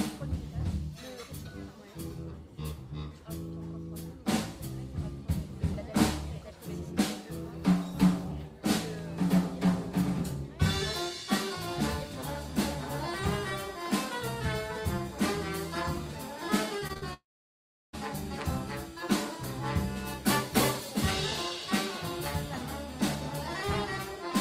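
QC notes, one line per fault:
16.79–17.04 s, repeated packet loss (robotic sound): four short holes, the longest 44 ms, together about 100 ms, each patched by stretching the previous sound, so about 42% of this span is filled-in audio. Real sound between the holes keeps it choppy rather than silent.
17.14–17.95 s, long network dropout: a single 0.8 s gap, likely from a lost connection, where the last sound carries on briefly as a fading buzz or hiss and then about 0.7 s of silence follows. The sound resumes further on with that stretch missing, unlike the brief, rapid gaps just before.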